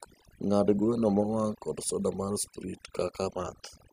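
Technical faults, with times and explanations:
Throughout: overdone noise removal. The noise reduction was set so aggressively that bands near its noise estimate were pushed far down or cut. The background collapses to near silence with twinkling specks. A spectrogram shows scattered isolated dots between dark gaps, and the waveform's pauses sit almost flat.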